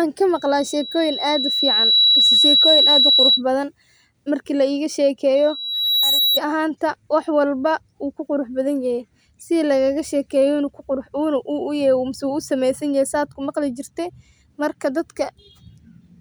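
From 0.35 to 3.42 s and again from 5.35 to 6.40 s, loudspeaker feedback squeal sets in at 3.9 kHz. The mic-speaker loop runs away, swelling over roughly a second and a half, then under a second, to a few dB above the speech. That gradual swell distinguishes it from a steady interfering whistle.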